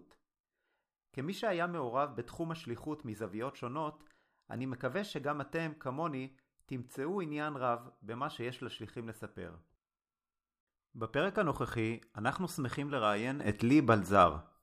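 At 13.40 s a sudden gain jump lifts the speech and its background noise together by about 8 dB until the end, likely from a digital gain setting applied instantly without a ramp. The waveform envelope steps up abruptly there, and the spectrogram brightens uniformly across all frequencies.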